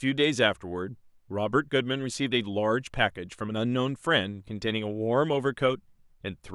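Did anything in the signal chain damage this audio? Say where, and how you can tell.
No, nothing in the signal chain audibly damaged this speech recording. No stage, from capture to playback, leaves any mark that can be heard.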